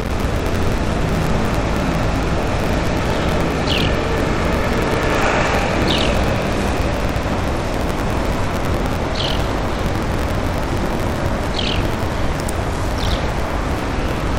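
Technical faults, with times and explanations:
Throughout, buffer tearing: a steady 43.1 Hz rattle under the sound, which fits a 1024-sample buffer, as about 40% of each period replays audio from about a tenth of a second earlier.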